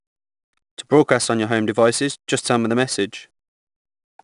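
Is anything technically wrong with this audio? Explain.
Yes. 4-bit ADPCM compression runs throughout the speech. Coarse 4-bit prediction steps leave a gritty hiss that rides the level, and nothing above 10.6 kHz, consistent with about 89 kbps.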